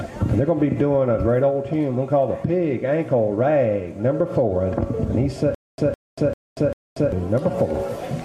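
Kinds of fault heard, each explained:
Stutter with silent gaps: from 5.55 to 7.12 s a 159 ms burst repeats four times with 235 ms of digital silence between, likely a stalled stream replaying its last fragment.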